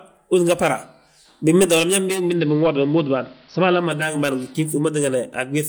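From 1.99 to 4.2 s there's digital radio blending to analogue: the receiver cross-fades over 432 ms to the AM feed, hiss appears, and the level shifts about 1 dB.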